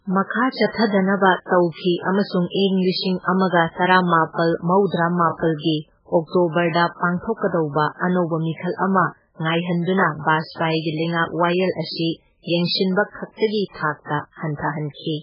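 Throughout the speech, the sound is dull and watery, with a swirling quality and nothing above about 5.2 kHz. This is heavy damage, likely from MP3 compression at a very low bitrate, consistent with roughly 8 kbps. Short of bits, the encoder cuts the treble at a fixed point and drops weaker frequency components, which flicker in and out from one frame to the next. That flickering makes the swirl, and the missing top end makes it muffled.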